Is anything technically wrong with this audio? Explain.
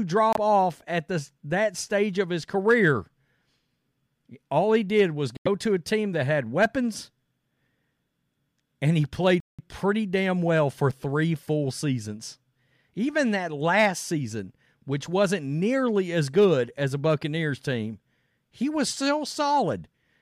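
Yes. The speech drops out three times with what is likely a Bluetooth stall: at 0.33 s, just before "off at the that"; at 5.37 s, between "he did was" and "to a team that"; and at 9.40 s, between "and he" and "pretty damn well for". Interference delays packets, the headphone buffer empties, and playback halts until retransmissions arrive. Each event is an abrupt cut to silence, lasting 26 ms, 86 ms and 184 ms, after which the speech resumes.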